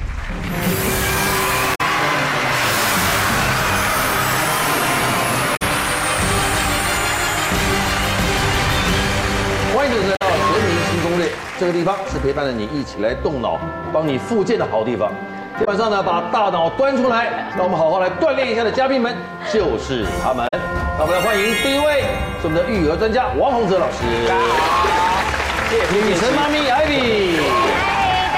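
Brief glitches break into the sound at 1.71–1.81, 5.53–5.62, 10.12–10.22, 15.61–15.68 and 20.44–20.54 s, each under a tenth of a second. These come from damaged data in a compressed stream: corrupted bytes make the decoder misread frames and lose sync until it finds the next valid frame.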